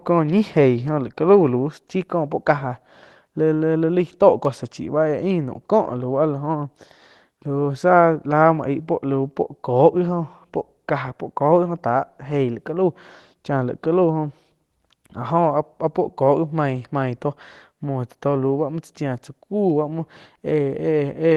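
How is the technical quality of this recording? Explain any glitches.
Nothing stood out on listening to this speech recording, which carries the slightly band-limited character of a call connection at around 12 kHz.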